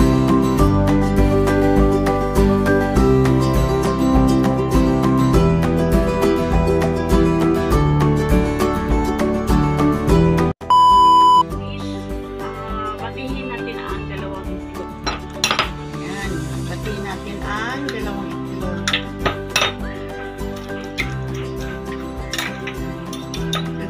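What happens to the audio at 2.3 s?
Crude rate conversion runs from 1.20 s to 3.64 s, so 2.3 s falls inside it. Through this stretch the sample rate has been changed by simply picking the nearest existing sample instead of filtering, which fits a drop from 48 kHz to 44.1 kHz. The skipped samples follow a regular pattern, leaving error roughly 35 dB below the signal made of shifted, inharmonic copies of it, heard as a gritty, inharmonic fizz riding on the louder and brighter sounds.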